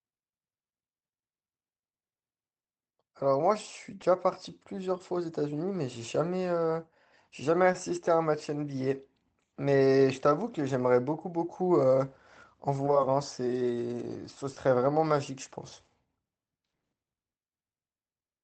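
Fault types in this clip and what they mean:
short concealed packet loss: five brief gaps of 10 to 30 ms were patched by extending the preceding sound, giving tiny smears or wobbles rather than silent dropouts.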